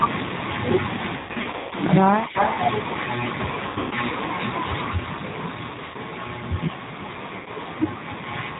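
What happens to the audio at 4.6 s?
At 4.6 s the speech carries G.729 codec damage, which runs through the whole clip rather than starting at that moment. The sound fits an 8 kbit/s G.729A stream: each 10 ms frame is rebuilt from a vocal tract filter, a pitch predictor and a handful of pulses, and nothing above 4 kHz survives. The speech sounds band-limited and plainly rough, with a buzzy, synthetic edge.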